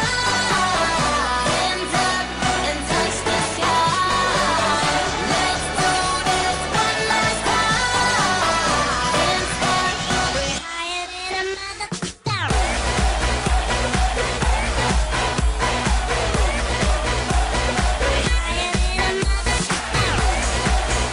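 Nothing stood out as a technical fault on listening.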